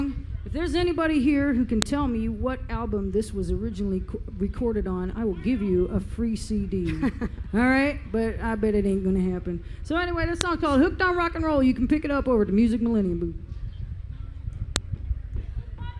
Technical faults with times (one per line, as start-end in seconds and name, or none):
1.82 file header played as audio
10.41 file header played as audio
14.76 file header played as audio